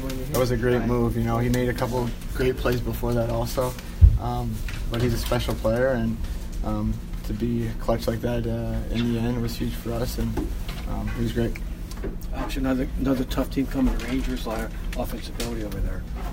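No technical faults are audible.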